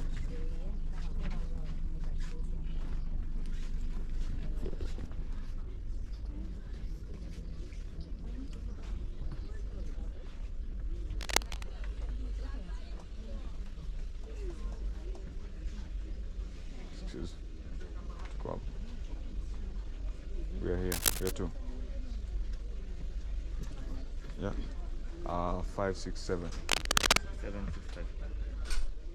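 Three short bursts of scratchy, rustling noise cut across the sound, from 11.21 to 11.63 s, from 20.92 to 21.32 s, and from 26.69 to 27.19 s. The first two sit at roughly the same level as the audio, and the last is a little louder. This is cable scratch noise, likely from a worn cable, connector or control being moved, so that its contact resistance jumped erratically and added dense, irregular noise.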